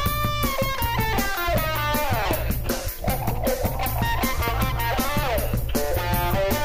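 At 2.31–2.33 s a loud pop, then a double pop at 4.48–4.66 s, each about 10 dB above the audio, likely electrical voltage spikes; heavier than clicks, with sound continuing underneath.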